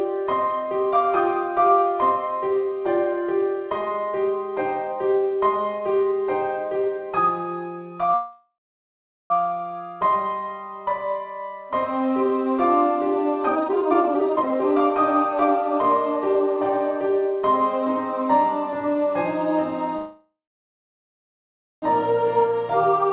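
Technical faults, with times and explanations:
8.14–9.32 s, call audio freeze: the sound stalls, the last moment carries on as a buzz or hiss that fades into about 0.79 s of silence, then resumes exactly where it stopped. Likely packets held up in transit emptied the jitter buffer, inserting a 1.16 s gap with nothing lost.
13.48–14.90 s, jitter buffer speed-up: the audio suddenly hurries, playing at about 174% speed while keeping its pitch. The buffer held more audio than it aims for, so the receiver repeatedly cut short pitch-period slices, discarding around a second to bring the delay back down.
19.97–21.84 s, call audio freeze: another stall, with the held sound decaying into roughly 1.49 s of silence before playback picks up where it left off. Likely delayed packets drained the jitter buffer again, adding a 1.85 s gap without losing any audio.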